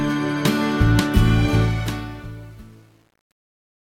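From 1.6 s to the end, the fade-out is processed at only about 9 bits without dither, causing truncation distortion on a fade. The fading level falls into coarse square steps, and from 2.11 s onward the tail turns gritty.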